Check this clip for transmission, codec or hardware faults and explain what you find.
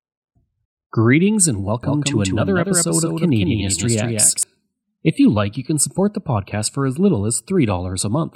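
One fault is present. From 1.83 to 4.43 s, a doubled audio track: the speech repeats around 200 ms late, about 5 dB quieter, likely from a second, slower capture path, starting and stopping abruptly.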